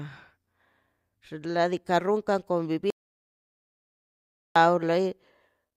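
At 2.90 s the speech cuts off abruptly, and there is an audio dropout to silence until 4.56 s. The gap is silent, with no room tone, and about 1.65 s of speech is lost. The input was likely lost, so silence was recorded.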